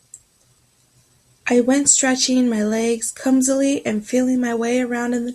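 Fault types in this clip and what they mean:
Nothing stood out on listening to the speech here.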